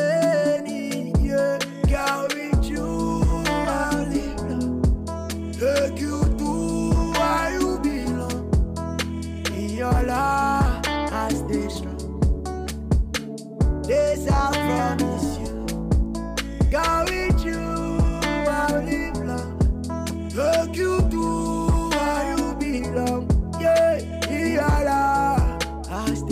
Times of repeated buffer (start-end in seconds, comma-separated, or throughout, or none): none